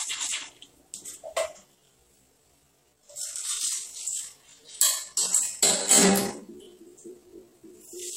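A recording of everyday sounds with a time-stretched section from 1.63 s to the end at 8.17 s. There the pace abruptly falls to about 0.58 times normal speed. The likely cause is software stretching the audio to fit a longer length and repeating short pieces to preserve pitch. The pitch staying unchanged is what sets this apart from simply playing the audio slower, which would also lower it.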